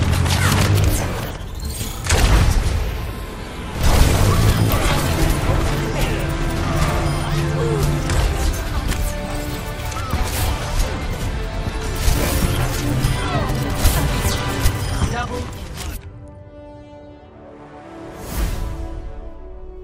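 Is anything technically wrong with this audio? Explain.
Yes. There is damaged data in a compressed stream at 4.72 s and from 11.12 to 11.16 s. Corrupted bytes make the decoder misread frames, lose sync and hunt for the next frame header. Each spot is heard as a brief chirp or blip.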